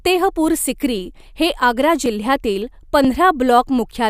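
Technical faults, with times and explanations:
2.06 s and 3.05 s, dropped buffer (overrun): the likely cause is the recording software falling behind so the hardware overwrote a few milliseconds of samples, and the remaining audio was spliced together. Each splice, right after "हे आग्रा" and again after "हे आग्रा जिल्ह्यातील", gives a slight skip forward with no gap of silence.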